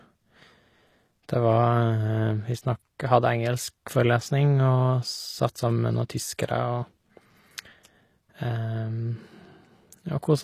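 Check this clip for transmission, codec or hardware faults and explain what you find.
One codec fault runs through the whole clip. The speech carries plainly audible HE-AAC compression damage, likely from that codec at a low rate, consistent with about 24 kbps. The codec stores only the lower spectrum in detail. The treble is rebuilt by copying lower bands upward and shaping them with a coarse envelope. The top end stays bright but is not the original. Its harmonics fail to line up. Sibilants sound gritty, metallic or lispy.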